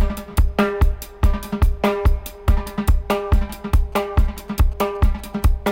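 From 3.78 s to 5.67 s a galloping pattern of ticks and short buzzes at 216.7 Hz cuts in, around 30 dB below the audio. These are GSM signalling bursts: a nearby 2G phone's signalling transmissions are being rectified by the audio circuit.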